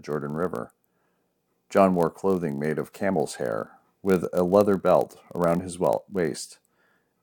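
Speech, carrying a block size mismatch (padded) throughout. A buzz sits at about 46.9 Hz, which fits a stage reading 1024-sample blocks at 48 kHz while the stage before it writes slightly fewer. The shortfall in each block is filled with silence, and that tiny gap repeating every block makes the buzz. Delivery runs at 0.999 of normal speed. Mains hum would be smooth and tonal. This buzz is gritty and gap-driven, and the slight slowing marks padding rather than dropped samples.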